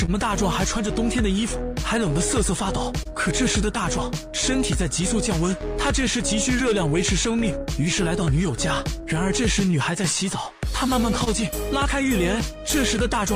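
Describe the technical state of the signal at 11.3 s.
A sound is held slightly too long from 11.24 to 11.29 s, with nothing missing. This is a short stall from a late packet. The jitter buffer ran dry, so the receiver stretched the last sound by 25 ms until the packet arrived, then resumed exactly where it left off.

Around that moment small timing edits are also under way. These are repeated timing corrections, running from 1.36 to 12.60 s. Over that stretch the receiver plays at about 99% speed and pads in roughly 70 ms altogether to keep pace with the incoming stream.

The timing corrections come from clock drift between sender and receiver. The sender's clock runs about one and a half percent slow, so the buffer keeps draining. That produces the ongoing padding.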